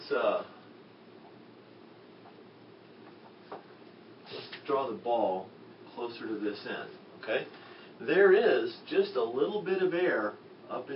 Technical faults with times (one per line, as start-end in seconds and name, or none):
none